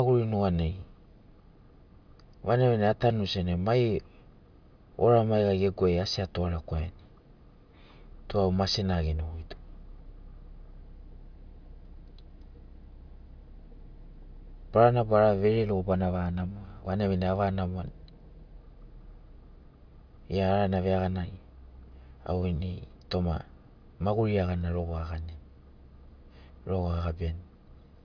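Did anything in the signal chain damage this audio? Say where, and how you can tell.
No, nothing in the signal chain damaged this audio.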